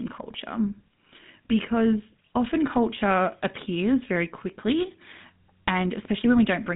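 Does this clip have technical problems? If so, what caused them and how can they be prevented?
Yes. GSM full-rate codec damage runs through the whole clip: the speech has the buzzy, gravelly roughness of this early mobile coder, which fits a 13 kbps GSM full-rate link. The codec rebuilds the voice from a vocal-tract model excited by evenly spaced pulses, discarding much of the fine excitation detail. The band is held to roughly 150 Hz to 3.7 kHz, with nothing above 3.8 kHz. To prevent it, record or route the call over a wideband path or a modern codec such as AMR-WB or Opus.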